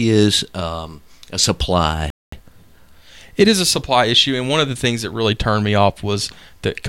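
At 2.10 s the player likely ran out of data, producing a playback stall: the speech cuts to silence for about 220 ms, then resumes at 2.32 s.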